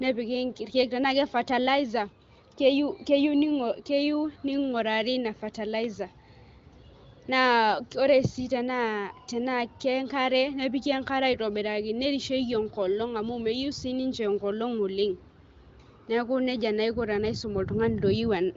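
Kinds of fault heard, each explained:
No kinds of fault are heard in this speech, which comes through the AMR wideband (HD Voice) codec with nothing above about 7.5 kHz.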